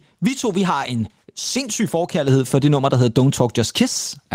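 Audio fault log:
2.28 s, microphone volume stepped up: right after "vi har en sindssyg" and before "for det nummer der", the level of the speech and the room behind it rises together by about 4 dB in a single step. That points to the call software judging the microphone too quiet and raising the device's input volume at once, not ramping it. Because the change happens at the capture stage, the background lifts in level just as much as the voice does.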